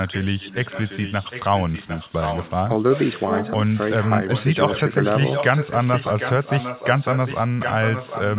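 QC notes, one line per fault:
0.00–3.19 s, 3.42–3.51 s, 3.74–4.12 s, 4.28–4.94 s, 5.11–8.38 s, echo leak: the far end's echo canceller likely let loudspeaker pickup through. A copy of the speech returns 753 ms late, about 10–15 dB below the speech in the middle spans and rising to about 5 dB below it at the end, band-limited to 4 kHz like the call path.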